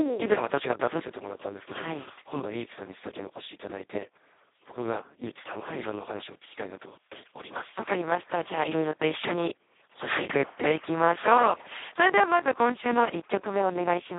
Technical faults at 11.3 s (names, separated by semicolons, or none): Speex codec